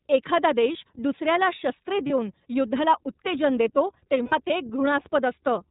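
It's a speech clip squeezed through the iLBC codec, so nothing above 4 kHz survives and the voice comes out a bit rough and synthetic, which fits the 30 ms frame mode at around 13 kbps. There are also lost iLBC frames at 2.06–2.11 s and, longer, at 4.23–4.33 s, where the decoder covers the gap with a held, buzzy vowel-like sound before the voice snaps straight back.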